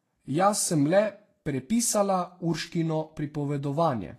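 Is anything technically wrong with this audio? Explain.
Yes. Throughout the speech there is plainly audible codec damage, likely from Vorbis compression at a low setting, with the sound pointing to roughly 33 kbps. Nothing reaches above 14.1 kHz, and the treble just below that cut-off is rendered as grainy hiss rather than detail, because the codec quantises the residue over its smooth spectral floor so coarsely that fine structure turns into noise of similar energy. Unlike a simple low-pass filter, which would only dull the top, this adds a rough, hissy texture and blurs consonant attacks.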